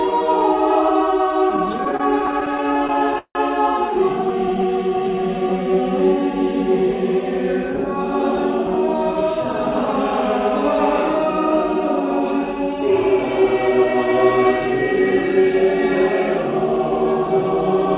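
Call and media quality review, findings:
Repeated stalls (stutter), 1.5–3.37 s: jitter buffer repeatedly ran dry on late packets; receiver stretched the last sound, fading it in the longest wait (168 ms). Stop-start dragging, about a fifth of that span concealed, nothing lost.

Repeated stalls (stutter), 4.29–4.65 s: same buffer underrun, milder; brief stalls of 10 ms or less.

Jitter buffer slow-down, 4.32–5.82 s: buffer rebuilding its reserve by repeating pitch periods and pause fragments, adding 178 ms. Audio plays at 89% speed, same pitch, sounds drawn out.

Jitter buffer speed-up, 7.70–10.64 s: buffer over target, receiver cutting short pitch-period pieces, roughly 0.3 s removed. Playback at 109%, pitch unchanged, hurried feel. Telephone-band path audible throughout, nothing above 4 kHz, which fits G.711.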